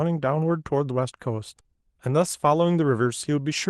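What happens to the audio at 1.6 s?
A short stall from a late packet occurs at 1.61 to 1.67 s. The jitter buffer ran dry, so about 32 ms of sound is held and stretched, then resumes intact.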